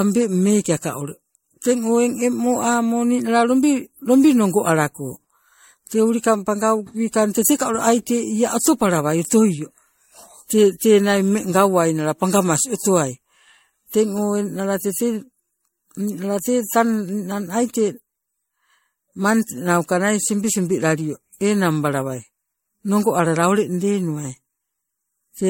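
A speech recording with generation loss throughout: a swirly, hollow, smeared sound with blurred attacks, likely from around five rounds of MP3 re-encoding at a rate fitting 64 kbit/s. A spectrogram shows nothing above 16.7 kHz and flickering holes through the upper bands.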